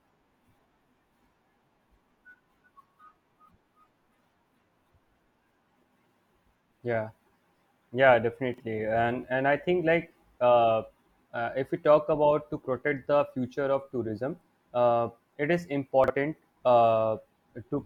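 At 8.54 s and again at 16.04 s the speech has chunks out of order, each disturbance spanning about 60 ms. In both cases a 20 ms chunk plays two chunks late, after the two that should follow it. No audio is lost, but the misplaced chunk creates three hard joins, heard as a brief jumbled stutter.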